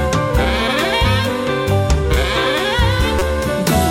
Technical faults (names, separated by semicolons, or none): corrupt frame decoded